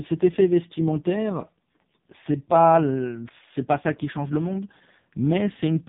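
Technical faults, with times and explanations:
Throughout, AMR narrowband mobile codec: the speech passed through a phone-network coder that samples at 8 kHz and rebuilds each 20 ms frame from a vocal-tract model fed by a handful of pulses. Nothing above 3.7 kHz survives, so the voice is boxed-in and dull, and the heavy damage, which fits the lowest mode at about 4.75 kbps, leaves it buzzy and synthetic because too few pulses are available to capture its natural texture.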